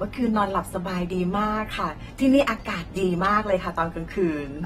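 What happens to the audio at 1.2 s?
At 1.2 s the speech carries AAC compression artefacts, present throughout the clip. Nothing sounds above 16.6 kHz. The tone is dull and smeared, with a warbling, fizzy edge on sibilants. This likely comes from AAC-LC coding at a low bitrate, near 36 kbps.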